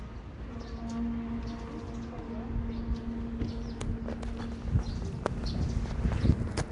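Sounds here, carrying a rough, hissy, smeared quality throughout with nothing above 10.6 kHz, likely from Nellymoser compression at around 44 kbps.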